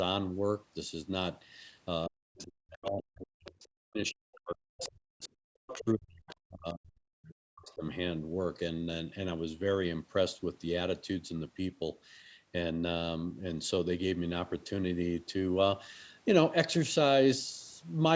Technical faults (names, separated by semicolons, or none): speech suppressed in double talk; other side's voice leaking through